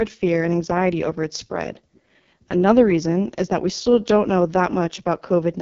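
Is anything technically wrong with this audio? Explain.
Yes. Throughout the speech runs through the AMR wideband (HD Voice) codec at heavy damage: a model-driven coder rebuilds the voice from pulses, sounding rough and raspy, which points to its lowest rate, around 6.6 kbit/s. Unlike narrowband telephony, content reaches 7.3 kHz before stopping.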